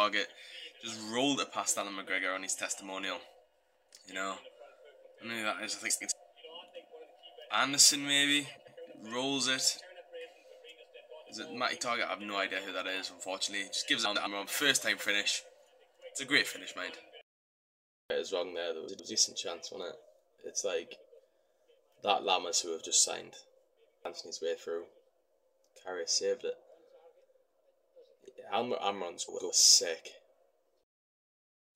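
Frames out of order occur five times, at 5.90 to 6.12, 8.57 to 8.78, 14.05 to 14.27, 18.88 to 19.10 and 29.28 to 29.50 s. In each, two adjacent runs of frames, each about 0.1 s long (which fits four frames per run), were decoded in swapped order. That roughly 0.2 s stretch of sound plays with its halves exchanged, giving a brief garbled flutter. No time is lost.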